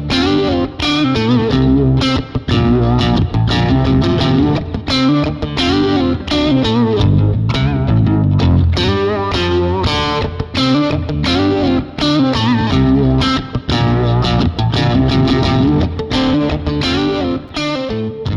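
At 17.48 s, chunks out of order: a 5.8 ms chunk plays one position late, swapping places with its neighbour and leaving a brief jumbled moment across the hard joins.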